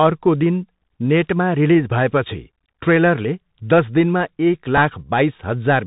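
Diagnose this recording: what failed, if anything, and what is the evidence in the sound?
The whole clip has gone through the Bluetooth CVSD headset codec, so the damage sits at the codec stage. Nothing above 4 kHz survives, giving that boxed-in narrowband sound, and there's a grainy hiss under the speech. The s sounds come out scratchy, and louder bright bits smear because the one-bit up/down encoder can't ramp its step size fast enough to follow them. That's all consistent with a 64 kbps CVSD link.

There's also a Bluetooth headset packet repeat at about 4.77 s, out on the wireless link between headset and phone. You hear it as a small tick, roughly 4 ms long, rather than a buzz. That points to one lost voice packet, with the chip decoding the previous packet's bits again to fill the hole. Good packets come back straight away, so no repeating run builds up into the 267 Hz drone.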